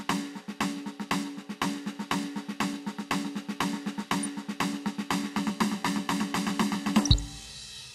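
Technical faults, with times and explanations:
7.00 to 7.19 s, DAB burbling: weak reception lets bit errors, at a rate of a fraction of a percent, slip past the error correction into the MP2 audio data, so corrupted samples and scale factors reach the decoder. Individual sub-bands of the music get short blips of noise or jump in level for up to a frame, across a stretch that fits about a dozen frames. The result is a brief burbling laid over the music.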